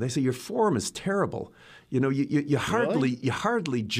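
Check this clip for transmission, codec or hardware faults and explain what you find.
Nothing stood out on listening to this speech clip.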